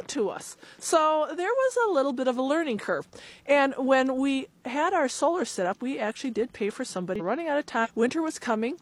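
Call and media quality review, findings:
Short glitches at 7.16 s, 7.16–7.21 s and 7.81–7.87 s. Damaged data in a compressed stream: corrupted bytes make the decoder misread frames, lose sync and resume at the next frame header.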